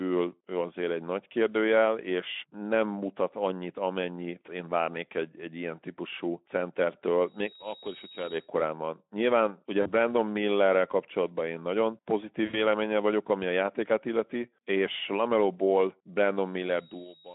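Speech, carried over a Speex-coded line, and it runs into two kinds of trouble. Loudspeaker feedback squeal shows up twice as a single tone at 3.8 kHz: from 7.10 to 8.56 s it swells over about half a second and ends up roughly 10 dB above the speech, and from 16.24 s to the end it builds over about 0.7 s to around 5 dB above. That's the mic hearing its own loudspeaker, with the loop gain tipping past one at that frequency so the tone feeds itself. Then there's VoIP packet loss concealed by the speech codec, at 9.81 to 9.89 s (a 40 ms gap) and 12.46 to 12.58 s (80 ms, between "kapcsolatban én nagyon" and "vagyok ami"). The decoder stretches its last pitch and filter across the hole with falling gain, so you get a short stretched, fading smear, and the voice stays weak or distorted for a moment after the audio comes back.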